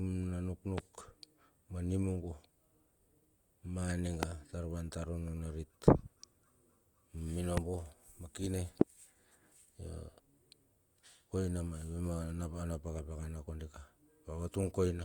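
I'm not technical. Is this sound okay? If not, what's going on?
No, not quite. There are four loud pops in this speech clip, at about 0.78, 4.23, 7.57 and 8.81 seconds. Each is a single sharp click, far louder than the talking and over almost instantly, while the speech carries on underneath. The likely cause is a brief jolt of electricity getting into the recording, from something like a loose cable, a switch, static, or a hiccup in the audio hardware.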